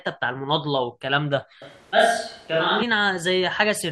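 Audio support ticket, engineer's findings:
Switch to a distant microphone, 1.62 to 2.82 s: speech turns roomy, hollow and thin with no real level drop and room noise roughly 35 dB down. Likely a failed close mic, so a far one filled in.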